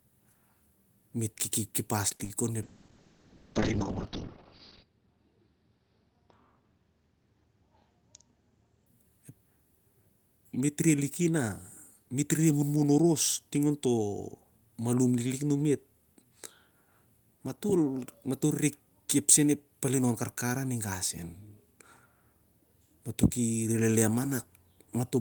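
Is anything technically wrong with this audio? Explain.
Yes, two problems. Repeated packet loss (robotic sound), 2.16 to 2.30 s: four gaps, each patched by extending the previous sound, leave the speech choppy. A call bitrate drop follows from 2.63 to 8.92 s. The encoder falls from 40 to 7 kbps, stays at its lowest for 2.2 s, and bandwidth shrinks from 20 kHz to 6 kHz, so the speech sounds muffled and watery.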